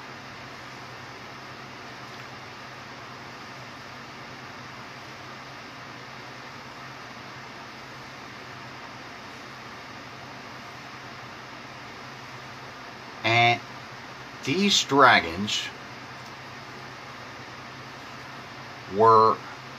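No technical faults can be heard anywhere in the recording.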